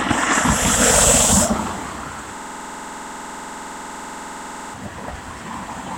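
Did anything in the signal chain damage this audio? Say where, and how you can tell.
Yes. A system hang loop at the driver or buffer stage runs from 2.37 to 4.74 s. One 46 ms slice repeats at 21.5 Hz, a rapid mechanical stutter that fits a 2048-sample ring buffer replaying while the host froze. About two seconds of audio are lost.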